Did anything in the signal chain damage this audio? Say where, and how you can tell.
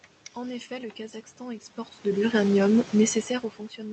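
No, nothing damaged this audio.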